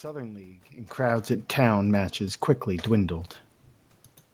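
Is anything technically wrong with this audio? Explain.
Yes. Automatic gain rising, from 0.72 s to 3.38 s: the gain control judged the input too quiet and slowly raised its level by about 4 dB. The speech and the room noise swell together across those seconds, unlike the talker's own movements near the start and end.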